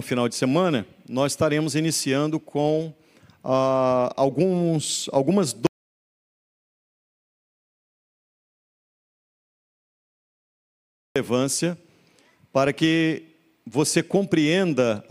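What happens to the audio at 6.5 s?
At 6.5 s the audio is in the middle of an audio dropout to silence running from 5.67 s to 11.16 s, about 5.5 s lost. The sound cuts off abruptly and returns just as abruptly, with silence between and no room tone. The input was likely lost while recording continued writing silence. On a waveform this shows as a flat line; on a spectrogram, a uniformly black band across all frequencies.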